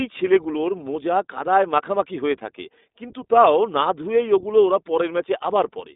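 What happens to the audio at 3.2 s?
At 3.2 s the speech is still passing through the iLBC codec, as it does throughout: each 20 ms frame's excitation is coded independently and nothing above 3.8 kHz survives. The speech sounds thin and band-limited, with a plainly audible rough, synthetic edge.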